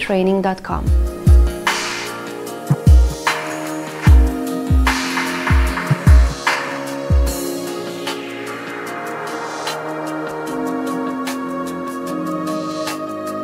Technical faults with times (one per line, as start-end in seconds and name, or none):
none